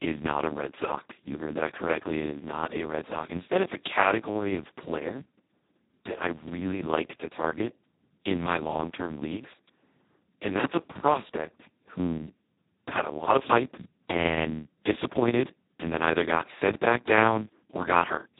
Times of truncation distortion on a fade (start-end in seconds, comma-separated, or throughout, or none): none